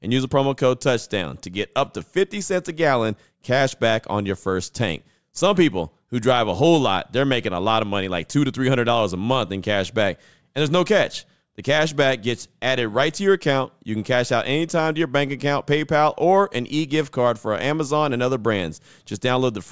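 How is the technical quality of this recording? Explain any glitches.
No audible glitches or technical faults anywhere in the speech recording.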